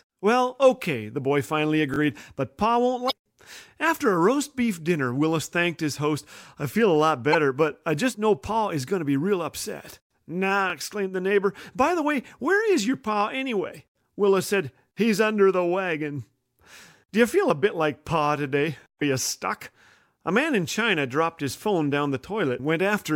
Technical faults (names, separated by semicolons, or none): repeated buffer; damaged data in a compressed stream